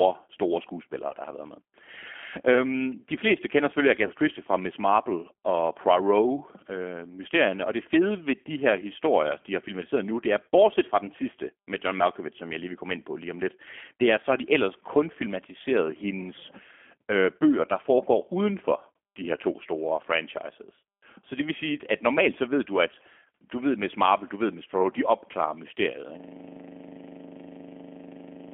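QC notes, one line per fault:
Throughout, G.729 codec: the speech is squeezed into a 200 Hz to 3.4 kHz phone band at 8 kbit/s, so it's rough and slightly synthetic, nothing above that.
1.09 to 1.15 s and 4.07 to 4.11 s, VoIP packet loss concealed by the speech codec: a 20 ms gap, about one packet each, gets papered over with stretched, fading sound that lingers briefly after.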